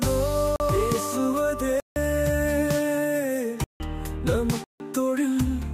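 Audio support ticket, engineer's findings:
Block of digital silence: 0.56–0.60 s (40 ms), then 1.80–1.96, 3.64–3.80, 4.64–4.80 s (160 ms each). Hard cuts to zero and back. Probable component: output render path missing its buffer deadline, so zeros were emitted.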